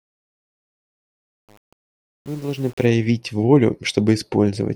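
Truncation distortion on a fade runs from 0.0 to 2.86 s, through the whole fade. The gain stage driving the fade rounds each sample to a coarse grid without dither, and the graininess suggests only about 7 bits of resolution. At the quiet end of the fade the waveform collapses into a few square steps, so it sounds gritty.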